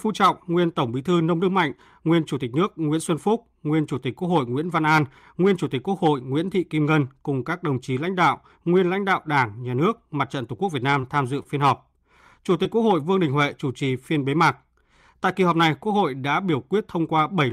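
Around 10.57 s, 11.0 s (just before "tham dự phiên") and 12.63 s, there's short concealed packet loss. About 20 ms of speech never arrived, so the decoder extended the previous sound and blended back, leaving a brief smear or wobble. At 11.43 s, right after "tham dự", a short stall from a late packet stretches the sound by about 24 ms while the jitter buffer waits. Nothing is lost, but there's a slight held buzz or dip.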